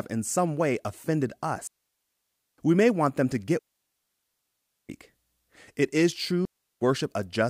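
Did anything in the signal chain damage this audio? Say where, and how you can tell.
Yes. The speech falls into clean, noise-free silence at 1.67–2.58 s, 3.59–4.89 s and 6.45–6.81 s. This is a digital wireless dropout: the radio link lost too much data, so the receiver muted.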